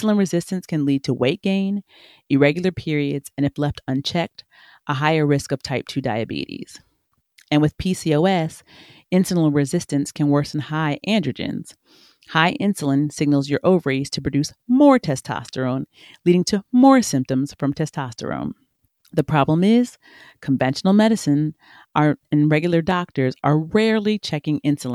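At 7.99 s a single sharp click cuts through the speech, a thin vertical line across the spectrum. It is likely dropped samples: a couple of samples, a tiny fraction of a millisecond, went missing, so the waveform jumps abruptly without losing any audible sound.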